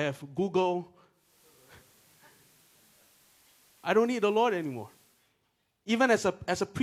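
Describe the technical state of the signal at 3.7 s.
At 3.7 s the radio is in a digital radio blending to analogue span (1.10 to 5.34 s): it has cross-faded over about a third of a second to the FM broadcast. Steady hiss sits roughly 30 dB under the speech, and level is unchanged. The arriving hiss marks this as an analogue fallback rather than a plain bandwidth cut.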